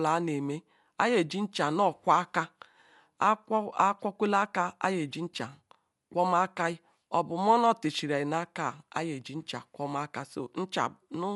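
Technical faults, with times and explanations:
Throughout, Dolby Digital compression: the speech sounds dull, with nothing above 11.5 kHz, and rough, fluttering noise surrounds its tones. The likely cause is low-bitrate coding, which fits about 64 kbps, where many frequency lines get no mantissa bits and are refilled with dither noise.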